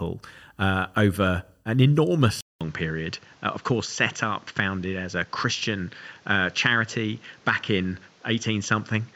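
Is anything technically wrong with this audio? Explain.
Yes. At 2.41 s the speech goes quiet for about 200 ms, then returns duller, with nothing above 7.6 kHz, a new background noise roughly 30 dB down and level unchanged, to the end. The input was likely switched to a poorer device with narrower bandwidth.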